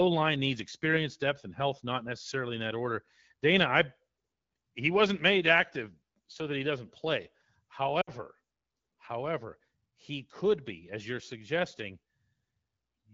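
At 8.01 s there's a stretch of lost AMR speech frames, about 60 ms through 8.10 s: the decoder smears the last good sound, then it fades quickly and returns rough.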